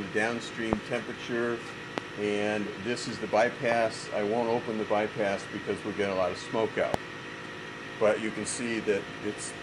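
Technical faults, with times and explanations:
0.73–0.75 s, 1.98–2.00 s, 3.72–3.74 s and 6.94–6.96 s: loud pop. Each is one sharp pop, roughly 20 to 25 dB above the sound. The sound carries on underneath. A brief voltage pulse, likely from a switch, plug or static, enters the signal.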